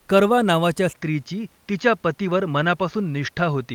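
At 0.93 s, just after "करवा नावाच्या", the speech drops out for a brief 20 ms gap. Then it returns duller and more boxy, and stays that way to the end. Nothing is left above 6.8 kHz. The loudness stays about the same. A faint new noise floor appears, far below the speech, on top of the room noise. This is likely an input switched to a poorer device, another microphone or a headset's call profile with a narrower band and its own coloration.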